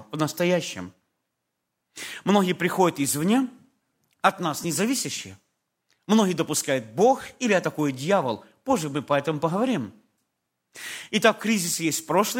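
At 2.38 s, just before "приходят извне", and again at 4.64 s, right after "от нас", there's a repeated buffer: a 5 ms chunk replays once, heard as a quick click.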